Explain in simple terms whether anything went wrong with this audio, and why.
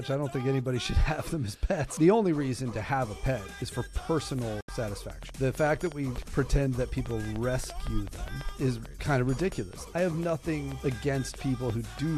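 Two things went wrong. The first is a train of clicks, most likely caused by interference from nearby equipment or a faulty connection or power supply sending short electrical pulses into the signal. From 4.39 s until 11.99 s you hear around forty similar ticks or pops, about five per second but not evenly spaced. They sit on top of the sound and keep going through the quiet moments too.

The second is a digital broadcast dropout. At 4.61 s the receiver stopped getting usable data, because the signal was lost or some data failed its error check, so it muted itself until good data arrived again. The sound fades out very quickly and is silent for about 72 milliseconds, until 4.69 s, which fits a few lost frames. Whatever was sent during that short gap is gone, and the sound then picks up again.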